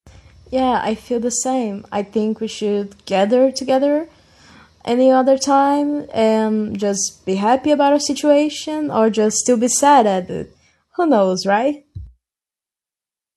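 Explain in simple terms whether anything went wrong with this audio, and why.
Nothing went wrong with this audio, since no fault can be heard anywhere in the speech.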